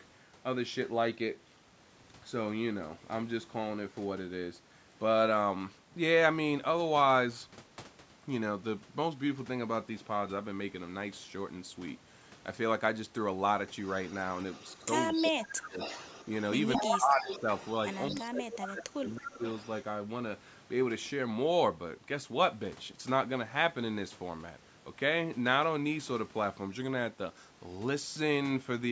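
Speech, and from about 13.9 s there's an echo leak: a copy of the voice about 221 ms late, at 13.85–15.47, 15.79–16.26, 16.61–18.22, 18.65–18.72 and 19.23–19.7 s, mostly about 10 dB down but roughly level with the speech around 16.6 s, likely a loudspeaker echo the far end's canceller missed. Overlapping that, you get speech suppressed in double talk at 14.81–15.77, 16.76–17.47 and 18.11–19.44 s, where the talker drops by up to around 20 dB, likely the canceller ducking everything while both sides spoke.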